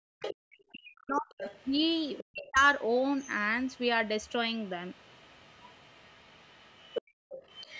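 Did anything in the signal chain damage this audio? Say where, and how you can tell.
Yes, the call processing's echo canceller. Speech suppressed in double talk: the talker dips by roughly 40 dB at 0.0–0.18, 0.71–1.3 and 2.23–2.62 s. This is likely the canceller muting both sides at once. Unlike a dropout, it coincides with the far voice.

The other side's voice leaking through is heard at 0.2–0.57 s, 0.98–3.28 s and 3.65 s to the end. It is fainter over time, from about −10 to −25 dB, and is likely residual loudspeaker echo. It is a second talker, not reverberation.

The background is gated by the echo canceller at 7.02–7.29 s. Room tone drops about 39 dB and then returns. Unlike double-talk suppression, it is the background that vanishes, not the talker.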